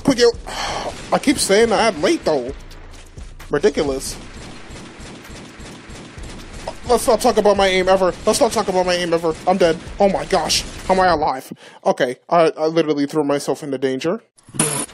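At 1.78 s there is damaged data in the compressed stream. A short stretch of the encoded audio is corrupt. The decoder misreads those frames and loses sync until it finds the next valid frame header. The result is a brief glitch.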